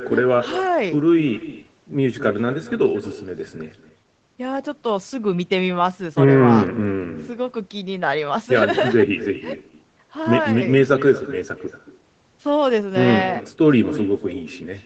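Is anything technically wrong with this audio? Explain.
Yes: there is echo with no canceller all the way through the speech. The far end is playing the call over a loudspeaker. Its microphone picks that up and sends it back uncancelled, about 15 dB below the talker and roughly a fifth of a second late. The result is a thin shadow trailing every phrase. On a spectrogram each syllable has a fainter duplicate just behind it. The waveform shows small echoing bursts following each peak.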